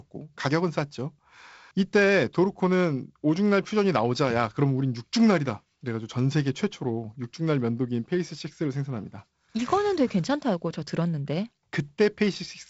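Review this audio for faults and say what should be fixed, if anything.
Nothing here needs fixing. The speech comes through G.722 wideband telephone coding at 48 kbit/s, with the band stopping near 7.7 kHz and only the light graininess that this bitrate brings.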